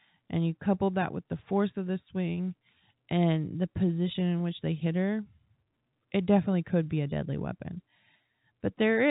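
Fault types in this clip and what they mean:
The speech has passed through G.711 telephone coding, which sounds like the A-law variant at 64 kbps, so nothing above about 3.8 kHz reaches the ear, and the coding leaves at most a faint noise that follows the level of the speech.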